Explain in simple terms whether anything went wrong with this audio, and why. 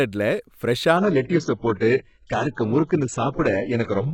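Something did go wrong. At about 0.97 s the speech suddenly gets duller, with nothing left above 8 kHz, and it stays that way to the end. That's an adaptive stream at a lower bitrate: the connection slowed, so playback switched to a much more compressed version without a gap.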